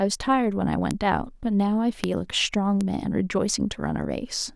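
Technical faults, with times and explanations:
0.91 s, 2.04 s, 2.81 s: bit error spikes. Flipped bits make single samples, or three at 2.04 s, jump to about −6 dBFS (−12 dBFS at 2.81 s), giving sharp broadband ticks.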